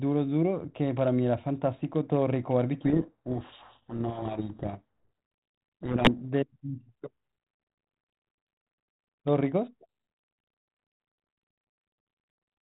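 From 2.82 to 6.25 s, a codec payload misread: the G.726 code words are read with reversed bit order, burying the speech in harsh, grinding distortion until the correct packing returns.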